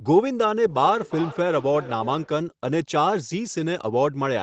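Speech with feedback echo between two devices from 0.67 to 2.41 s: repeats return roughly every 0.4 s at up to about −16 dB, showing as stacked, thinning copies on the spectrogram and waveform.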